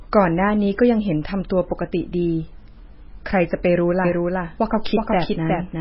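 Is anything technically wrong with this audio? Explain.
Yes, there are two faults. Throughout, an encoder short of bits, likely MP3 compression at a very low bitrate, has cut everything above 5.6 kHz, leaving speech dull, watery and swirly with smeared attacks. From 4.05 s to the end, a doubled audio track, likely from a second, slower capture path, adds a somewhat quieter full-band copy about 0.4 s behind, which starts abruptly.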